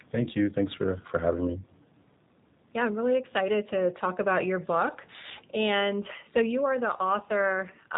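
G.729 codec coding runs throughout this speech clip, with plainly audible damage: the audio is rebuilt from a vocal tract filter, a pitch predictor and a few pulses per 5 ms subframe, so it sounds rough and synthetic, with nothing above 4 kHz, which fits G.729A at about 8 kbit/s.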